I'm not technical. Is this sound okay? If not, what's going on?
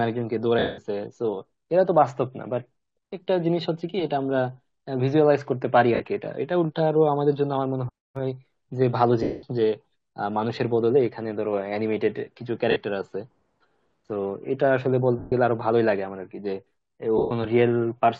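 No. Six times the speech briefly turns into a hissy, blurred smear and then thins out: at 0.59 s (about 0.19 s long), 5.95 s (0.05 s), 9.23 s (0.2 s), 12.71 s (0.05 s), 15.19 s (0.13 s) and 17.18 s (0.13 s). These are lost LE Audio frames. Chunks of the wireless Bluetooth signal never arrived, so the decoder filled each gap by replaying the last bit of sound in scrambled form, letting it fade during the longer gaps.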